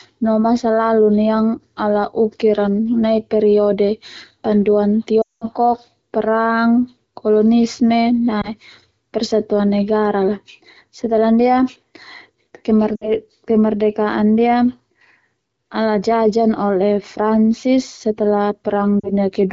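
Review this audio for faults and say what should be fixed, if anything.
Lost AMR speech frames occur four times: 5.21 to 5.45 s, 8.41 to 8.49 s, 12.95 to 13.11 s, and 18.99 to 19.13 s. Radio errors corrupted these frames. The decoder then repeated the last good pitch and vocal tract settings at falling gain. The first event is a 200 ms run. The sound drops to near silence within two frames, then returns weak or rough. The single lost frame gives a brief dip or warble. Wideband coding stays clear around them. Stronger channel error protection or better radio coverage would prevent these losses.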